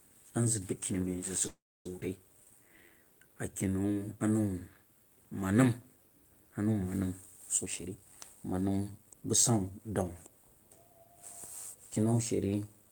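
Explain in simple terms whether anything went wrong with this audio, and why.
Several things went wrong with this speech, both throughout and at specific moments.

Throughout the clip there is overlap-add ripple. The sound was chopped into short overlapping pieces and glued back together, but the overlaps don't add up evenly. So the loudness wobbles up and down about a hundred times a second. You hear it as a fast, buzzy flutter. It gives the whole recording a rough edge.

From 1.47 to 1.86 s there is a call audio freeze. The sound stalls for about 0.38 seconds. Briefly the last sound hangs on, then about 0.29 seconds of silence follows. After that the speech picks up exactly where it stopped, so nothing is lost. It just arrives late. The likely cause is data packets held up on the way, leaving the receiver with nothing to play.

Right after, at 2.00 to 2.02 s, there is a skip ahead. The playback jumps forward almost without a gap. 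About a third of a second of speech is simply gone. The two sides of the jump are joined nearly directly, so the words seem to lurch. This cut away much of the delay that the freeze had just built up.

From 2.38 to 4.01 s there is a jitter buffer slow-down. The receiver was rebuilding a safety reserve of audio. It did this by repeating tiny slices of sound over and over. The speech plays at 86 percent of normal speed, stretched by about a quarter of a second in total. The pitch stays the same. Sounds feel drawn out and sluggish.

From 7.62 to 9.80 s there is a jitter buffer speed-up. Here the receiver had too much audio waiting. To catch up, it trimmed out many tiny slices. About four tenths of a second disappears this way. The speech runs at 117 percent of normal speed. The pitch doesn't change, but the talking sounds hurried and rushed.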